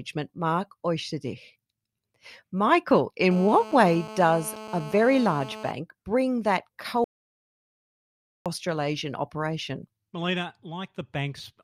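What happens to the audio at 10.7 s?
Nothing goes wrong at 10.7 s; the speech continues intact through that moment with no fault to be heard.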